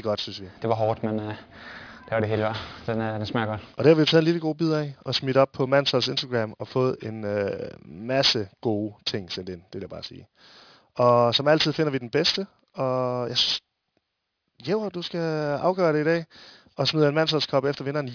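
Speech, with aliasing throughout. Content above about 5.5 kHz has folded back below that edge instead of being filtered off, which fits a drop to roughly 11 kHz sampling without an anti-alias filter. The folded energy sits only about 10 dB under the speech, making sibilants gritty and metallic, with the spectrum pressed hard against the band edge.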